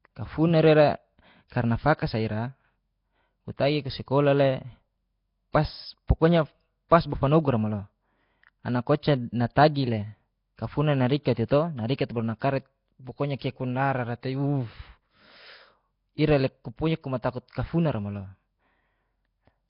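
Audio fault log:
Throughout: Nellymoser compression, likely the cause. The speech is rough and hissy, with a smeared, underwater edge and nothing above 5.3 kHz. Heavy damage like this fits a low rate around 22 kbps, where thin bands get noise-filled instead of coded properly.
6.08 s: pre-echo. About 17 ms of hiss creeps in just ahead of a sharp onset, softening its attack. The codec's noise, sized for the loud part of the block, has leaked backwards into the quiet moment before it.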